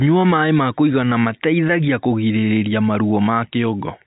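Speech over a G.711 telephone path with nothing above 3.8 kHz, and no technical faults are present.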